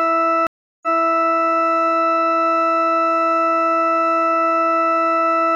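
From 0.47 to 1.24 s the music cuts out for 0.36 s and returns 0.42 s earlier, repeating material: a stream reconnect restarted the decoder mid-stream.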